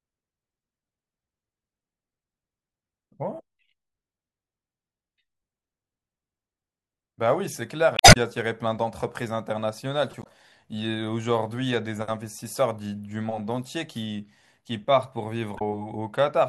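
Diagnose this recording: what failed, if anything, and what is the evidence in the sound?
Three short disturbances break into the speech: one from 7.96 to 8.17 s, then shorter ones from 10.19 to 10.27 s and from 15.55 to 15.62 s. The failure sits at the codec stage and points to damaged data in the compressed stream. Corrupted bytes in the encoded file made the decoder misread or refuse those frames, so it lost sync until it found the next valid frame header and resynchronised.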